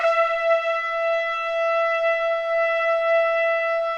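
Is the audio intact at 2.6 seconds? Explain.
Yes, at 2.6 seconds the audio is intact, with no dropout, click, distortion or other fault at that point.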